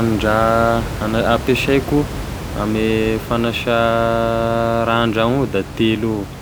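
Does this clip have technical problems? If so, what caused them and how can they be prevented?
No, this clip has no technical problems, so there is nothing to prevent.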